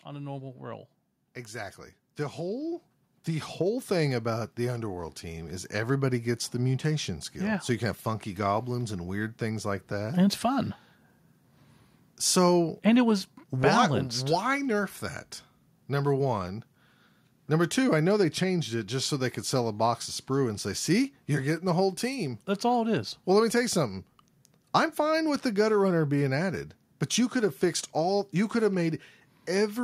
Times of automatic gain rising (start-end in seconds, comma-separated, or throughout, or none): 0.05-9.75